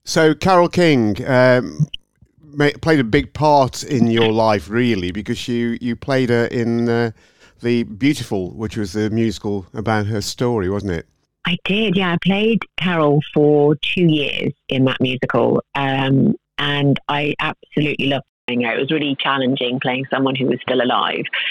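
At 18.28 s a 200 ms gap, then boxy sound, nothing above 4.4 kHz, faint new hiss: likely the input switched to a poorer device.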